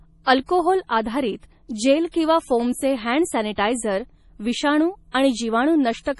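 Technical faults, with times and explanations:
Throughout, MP3 compression: the speech sounds watery and swirly, with nothing above 11.5 kHz and weak detail flickering between frames. This is likely MP3 encoding starved of bits, fitting a rate near 32 kbps. Unlike a plain low-pass filter, the damage shifts and warbles.
3.53–3.58 s, pre-echo: just after "जेल किंवा फोमचे हँड", a short hiss runs about 45 ms ahead of a sharp attack, which then lands soft. The codec spread noise for the loud onset across its whole block. Unlike ordinary background hiss, it comes before the attack.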